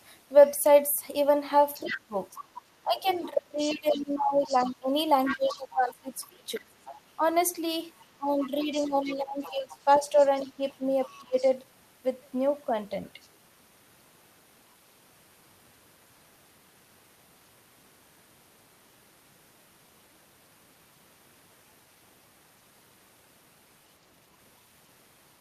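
From 1.74 to 2.43 s a second voice sits under the speech at about 10 dB down. This is the other side's voice leaking through, likely loudspeaker echo that the echo canceller left in the microphone signal. It returns from 3.14 to 4.73 s at about 15 dB down, from 5.26 to 5.59 s at about 10 dB down, from 6.86 to 6.96 s, and from 8.01 to 11.49 s at about 20 dB down. On a spectrogram it shows as a fainter, independent set of harmonic striations woven between the main talker's, with its own pitch contour.

Overlapping this, from 1.81 to 7.22 s, the talker's speech is suppressed in double talk. Because both sides speak at once, the canceller likely fails to separate the local voice from the echo and turns the whole signal down. The speech dips by as much as about 20 dB, across roughly three seconds in total, and sounds choppy and dulled. The same pumping recurs from 8.16 to 11.36 s, reaching about 15 dB of attenuation across roughly a second and a half. 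The waveform envelope shows sudden notches and shrunken stretches, and the spectrogram shows the upper harmonics fading in patches where the two voices overlap.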